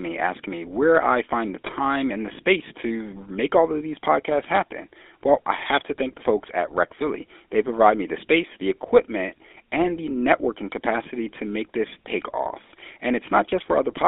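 Throughout, the speech carries GSM full-rate codec damage, and it is plainly audible. The sound matches a 13 kbps vocal-tract model driven by sparse pulses, so the voice turns buzzy and gravelly. The line band runs from 300 Hz to 3.6 kHz.

GSM bit errors strike twice. The first runs from 1.66 to 1.72 s, after "where I find the" and before "and the space to". The second runs from 5.58 to 5.64 s, just before "to thank the folks". Each lasts about 60 ms, which fits three 20 ms frames. Corrupted bits reach the decoder's filter, pitch or gain values, and the speech breaks up for that span. The error rate is 1.64% in the first burst and 0.63% in the second.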